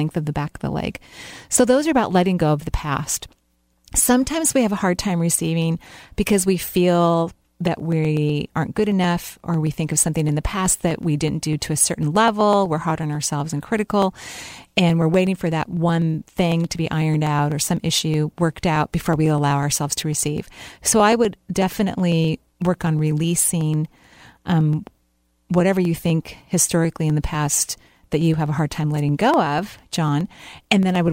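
Periodic USB or driver dropouts run from 7.3 s, just after "receiving because we feel", to 31.08 s in this speech clip. Every 0.124 s a sub-millisecond slice is skipped, giving evenly spaced ticks.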